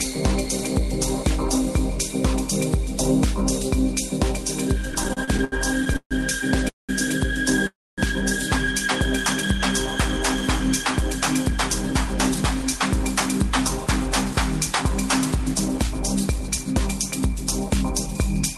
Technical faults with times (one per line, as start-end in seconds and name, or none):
4.92-6.91 repeated stalls (stutter)
7.67-8.00 call audio freeze
11.52-18.57 jitter buffer speed-up